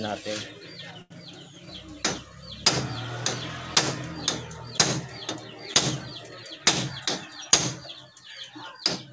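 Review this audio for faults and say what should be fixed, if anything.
At 1.02 to 1.12 s, a short stall from a late packet: the jitter buffer ran dry, so the receiver held the last sound for 84 ms until the packet arrived, then resumed where it left off. Nothing is lost, but that moment drags with a faint buzzy dip, and the delay grows by 84 ms. Deeper jitter buffering or a steadier network path would keep packets arriving before they are needed.

From 6.36 to 7.45 s, a jitter buffer speed-up: the buffer had built up excess delay, and the receiver trimmed it by repeatedly cutting short pitch-period slices, around 70 ms in total. The audio plays at 107% speed without any pitch change and sounds briefly rushed. Smoother packet delivery, so packets don't bunch up after a delay, would remove the need for this catch-up.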